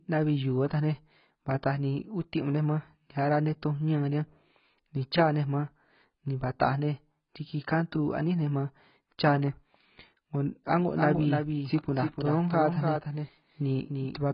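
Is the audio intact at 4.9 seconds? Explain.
No, at 4.9 seconds the speech carries the same heavy damage it has throughout: nothing above 5.4 kHz, and a dull, smeared, warbling texture. That's likely AAC compression, with the encoder's hearing model discarding spectral detail at a low bitrate, around 16 kbps.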